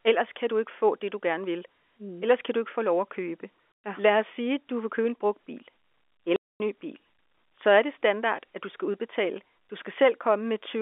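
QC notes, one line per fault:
3.84 s and 6.36–6.6 s, packet loss filled with silence: the sound cuts to dead silence with hard edges, for 120 ms and then 240 ms. Lost packets were replaced by silence, and both gaps fit 30 ms packets.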